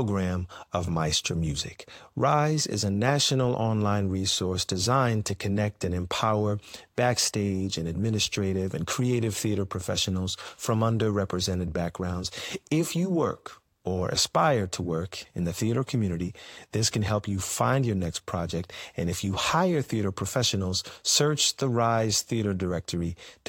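A recording of speech, with no technical fault to be heard anywhere in it. Nothing in the audio calls for a time or a cause.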